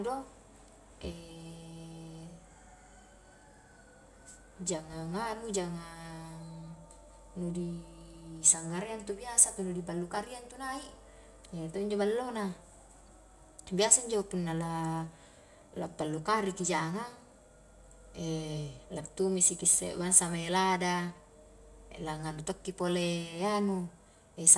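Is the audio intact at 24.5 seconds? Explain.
No. At 24.5 seconds you're inside a stretch, running from 16.58 s right to the end at 24.58 s, where the resampler restarted on every block. The 48 kHz to 24 kHz conversion was done on 20 ms chunks independently, so each chunk edge had no real neighbouring samples to work from and picked up a small glitch. With blocks that short, those edge errors stack into a 50 Hz buzz riding on the speech, present only while there's signal.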